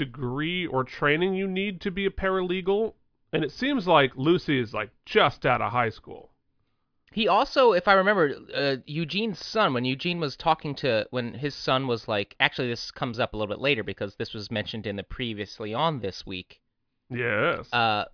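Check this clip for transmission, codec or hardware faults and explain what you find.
No faults found in this speech recording.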